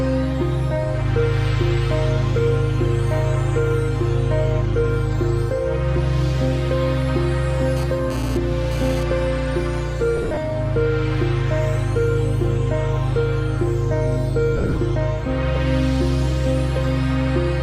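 From 7.77 to 9.03 s, GSM phone buzz appears: a nearby handset's 217 Hz radio bursts, rectified by the audio circuit, produce a harsh rasp about 16 dB below the signal, coming and going as data moves. On a spectrogram it shows as evenly spaced harmonic stripes that start and stop.

Lost LE Audio frames follow at 10.17–10.37 s and again at 14.57–14.77 s. Around 110 ms and 140 ms of audio go missing, scattered across each 200 ms span in gaps of up to about 30 ms. The LC3 decoder fills each gap with a repeated spectrum given random phase, so tones blur into a brief noisy smear. On a spectrogram the harmonics dissolve into diffuse noise, and the waveform looks ragged.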